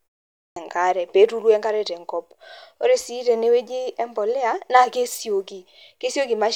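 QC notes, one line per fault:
0.52–0.56 s, clipped start after a pause. The speech begins after 0.52 s of silence, and its first 43 ms are lost. The output device had gone idle and needed that long to wake. The first word starts abruptly, missing its opening sounds.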